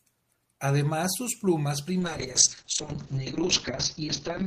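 At 2.0 s, right after "sus plumas", a call bitrate drop sets in and lasts to the end. The speech turns rough and watery, and the top end narrows from about 20 kHz to an 8 kHz cut-off, which fits the encoder falling from around 32 kbps to roughly 6 kbps and staying lowest for 1.66 s. Unlike packet loss, nothing stutters or drops out; the sound stays continuous, only coarser and duller.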